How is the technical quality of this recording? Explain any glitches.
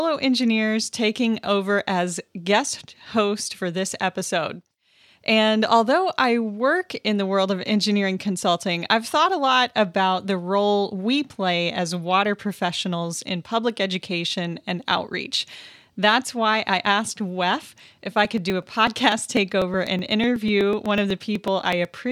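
The recording has one clear glitch, in its final few seconds. From 17.88 s to 21.97 s the speech carries periodic USB or driver dropouts: around thirty tiny gaps, one every 0.124 s, each skipping about a millisecond of audio outright rather than filling it with silence. Something is briefly stalling the USB bus or audio driver on a fixed timer. You hear a steady ticking riding on the voice, sounding only while there is signal. Its strict, even spacing distinguishes it from random network packet loss or clipping crackle.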